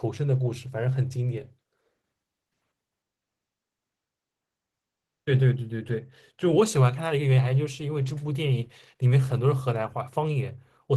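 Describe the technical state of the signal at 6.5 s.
Opus voice compression, present throughout, codes speech coarsely at a low rate fitting about 16 kbps, leaving it plainly hoarse and slightly robotic at 6.5 s.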